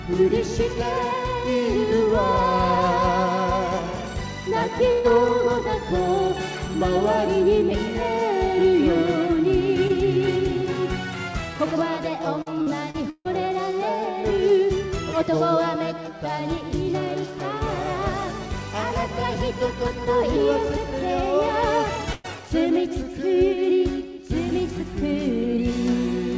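At 4.92 s a burst of packet loss runs to 5.07 s: about 120 ms of audio went missing, and the receiver bridged it by extending the last sound and fading it down, so a held buzz or fading hiss replaces the lost stretch before playback resumes further on.

From 12.42 s to 13.28 s comes repeated packet loss with a robotic sound. Four separate holes, the longest 150 ms, are each patched by continuing the preceding sound. Roughly a third of the span is concealed, giving choppy, robotic audio with pieces missing.

At 22.13 s a second burst of packet loss ends at 22.27 s. Again about 120 ms is lost and filled with a decaying continuation of the last sound, and the audio picks up later without the intervening portion. Throughout, the call path's G.722 coding leaves nothing above 8 kHz, consistent with a 64 kbps wideband link.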